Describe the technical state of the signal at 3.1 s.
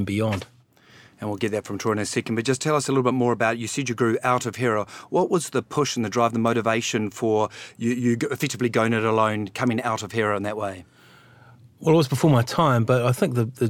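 At 3.1 s the speech signal is intact, with no technical fault present at that moment.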